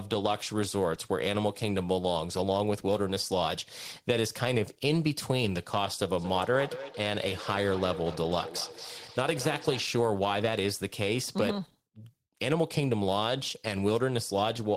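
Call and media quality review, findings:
Feedback echo between two devices, 6.19 to 9.86 s. Speech returns at a steady interval of about a fifth of a second, loudest repeat about 12 dB below the direct speech. Probable component: a second device on the same call in the same room, its playback re-entering the first microphone. Each device's echo canceller removes only its own output, so the loop passes through uncancelled.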